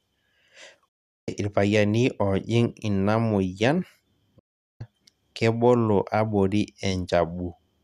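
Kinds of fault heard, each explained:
Digital broadcast dropout: the receiver muted after corrupt frames, silencing speech 0.4 s from 0.88 and 4.39 s; flat waveform, blank spectrogram bands.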